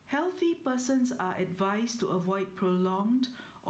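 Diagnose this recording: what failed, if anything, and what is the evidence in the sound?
Gain swinging around 10 dB, with loud and soft parts squashed closer in level: gain pumping at the input stage, likely excessive gain clamped by a fast limiter.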